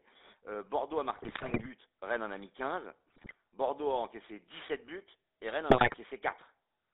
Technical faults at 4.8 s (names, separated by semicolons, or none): GSM full-rate codec